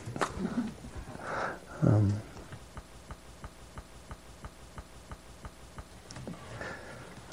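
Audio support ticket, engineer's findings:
Broken-record loop, 2.91–5.91 s: a 335 ms fragment repeats nine times consecutively; likely a stalled player or stream resending its last buffer. Underlying audio lost.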